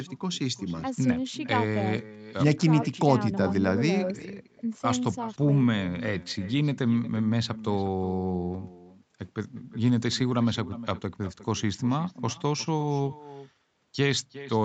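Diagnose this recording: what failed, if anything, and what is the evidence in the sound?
Echo with no canceller, at the call-processing stage: the speech is shadowed throughout by a thinner copy roughly 400 ms later, about 16 dB down, because the far end's speaker feeds its microphone unremoved.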